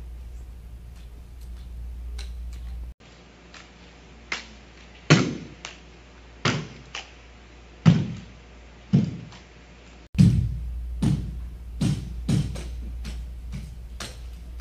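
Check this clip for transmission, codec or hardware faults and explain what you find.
One fault: from 2.92 to 10.15 s, the input was likely switched to a poorer device that passes nothing above 7.6 kHz. The sound turns duller, with an 80 ms gap at the switch, faint new background noise, and no change in level.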